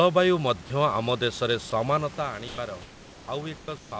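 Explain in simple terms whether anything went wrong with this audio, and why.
Yes, two things went wrong, both tied to how the call decides when someone is talking.

At 1.70 s a tiny piece of speech, about 20 ms, vanishes and is replaced by a hiss. This is sound dropped by the voice detector: the sending side likely mistook that quiet bit of speech for background and briefly stopped sending it, so the listener got filler noise instead of the real sound.

Comfort noise in place of the background appears in the pauses at 2.48 to 2.58 s, 2.82 to 3.28 s, 3.58 to 3.68 s and 3.78 to 3.92 s. During these gaps the real room sound is swapped for a plain, even hiss. Its loudness differs slightly from the real background, a touch louder in the first gap and a little quieter in the later ones. The likely cause is the sender pausing transmission when it hears no talking while the receiver fills the silence with made-up noise.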